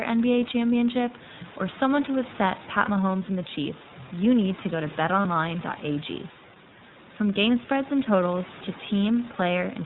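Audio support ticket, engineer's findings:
iLBC codec, whole clip: band stops at 4 kHz, speech slightly rough and synthetic, plainly audible. Each 30 ms frame coded standalone, which fits a 13.33 kbps iLBC stream. Narrowband telephony sound, not a mic issue.

Lost iLBC frames at 2.85 s and 5.22 s, about 30 ms each: short held buzzy vowel where the decoder repeats the last pitch cycle plus noise. Likely one dropped packet each time; frames are independent, so the voice snaps back right away. Room noise sits about 22 dB under the speech.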